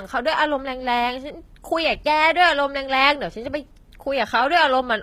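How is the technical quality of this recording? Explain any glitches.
The recording has one fault, present for the whole speech clip: low-bitrate audio saved at a high bitrate. The sound carries the smeared, thin character of heavy compression throughout. The cause is likely an earlier low-bitrate encoding, consistent with HE-AAC at around 20 kbit/s, later re-saved as MP3 at a high rate that fits 256 kbit/s. The larger second file cannot restore what the first encoder discarded. So the damage stays audible, and the re-encode adds almost nothing.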